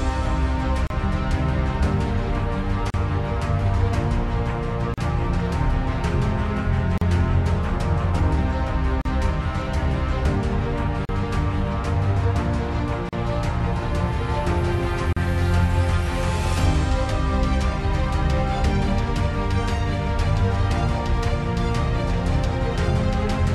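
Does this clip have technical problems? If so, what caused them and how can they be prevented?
Yes. A gap at a join of encoded pieces occurs at 0.87, 2.90, 4.94, 6.98, 9.01, 11.05, 13.09 and 15.13 s. The first lasts 32 ms and the rest about 38 ms. Each is a brief, smeared silence every two seconds. Separately encoded two-second pieces kept their encoder start delay and final-frame padding when they were joined. To prevent it, encode the audio as one continuous stream, or trim each piece's delay and padding before joining.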